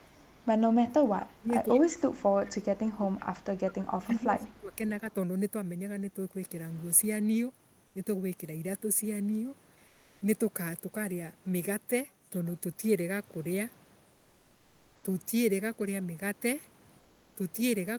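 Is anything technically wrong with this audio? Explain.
Yes, three kinds of fault are audible in this speech clip.

Echo leak at 0.0–0.34, 1.69–1.97, 2.46–2.52, 3.41–3.87 and 4.56–4.76 s. A faint copy of the voice trails it by 176 ms, roughly 20 to 35 dB down. This is likely a far-end echo canceller letting loudspeaker pickup through.

Speech suppressed in double talk at 0.81–1.53, 1.75–3.13 and 3.94–4.86 s. The voice dips by as much as about 25 to 30 dB. This is likely an echo canceller mistaking the talker for echo while both sides speak.

Comfort noise in place of the background at 9.91–10.21, 14.17–14.95 and 16.99–17.35 s. During these pauses, the real background gives way to a smoother noise about 1 to 3 dB quieter. This likely comes from discontinuous transmission of the Opus kind, with the receiver filling the gaps with synthetic noise.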